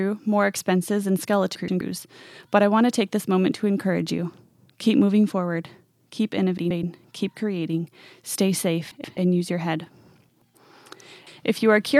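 Frames out of order occur at 1.55–1.81 s after "more expenses and", at 6.58–6.83 s, at 8.91–9.17 s between "keep creating stay" and "use your head", and at 10.30–10.55 s after "use your head". Each time, two neighbouring blocks of about 128 ms were decoded in reversed order, so the quarter-second stretch plays with its halves swapped. It sounds like a garbled flutter, and no time goes missing.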